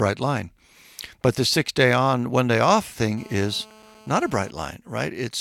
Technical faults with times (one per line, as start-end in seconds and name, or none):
3.18-4.50 GSM phone buzz